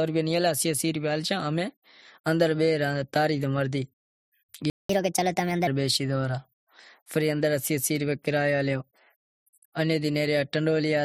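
At 4.70 s the player likely ran out of buffered data or had its output thread blocked, so nothing reached the output until 4.89 s. This playback stall cuts the speech off mid-flow with a gap of 194 ms, a clear hole rather than a brief click, before the sound picks up again from the point where it stopped.

From 4.89 to 5.67 s the player works off the backlog that built up during the gap by resampling it at 1.25 times normal speed. This catch-up at higher speed speeds up speech and shifts it upward by about four semitones together, giving a brief hurried, chipmunk-like quality. At 5.67 s the lost time has been made up, and speed and pitch drop back to normal.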